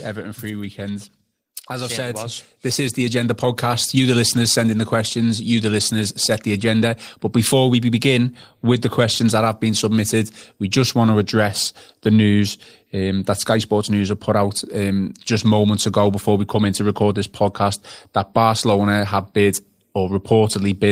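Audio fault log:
0.75–5.24 s, automatic gain rising: the AGC decided the input was too quiet and slowly cranked itself up by about 10 dB, so the speech and the room noise behind it swell louder together over those four-and-a-half seconds instead of staying level.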